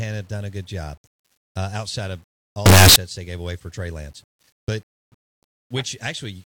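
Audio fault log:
2.66 to 2.96 s, signed and unsigned mixed up: for about 0.3 s the speech turns into a very loud, harsh buzz in which the quiet parts are as loud as the rest. The likely cause is 8-bit samples read with the wrong sign convention, so the top bit flips and every zero crossing becomes a full-range jump. Clipping only flattens peaks.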